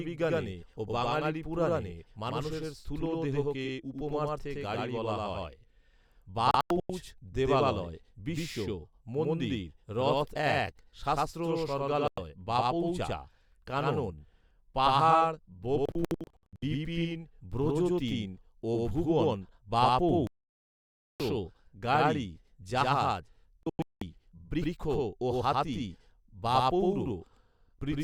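Doubled audio track runs through the whole of this speech recording: a second full-band copy, about as loud as the first, trails by roughly a tenth of a second with no decay or room colour. This is likely from the signal being captured twice, once through a slower path. Digital broadcast dropouts occur at 6.51–6.90 s, 12.08–12.18 s, 15.86–16.63 s, 20.27–21.20 s and 23.63–24.02 s. The receiver muted whenever frames went missing or failed checks, leaving silent holes where that audio is lost. The first, third and fifth gaps are clusters of short holes. The fifth's longest stretch is 0.19 s, and the fourth is one solid 0.93 s silence.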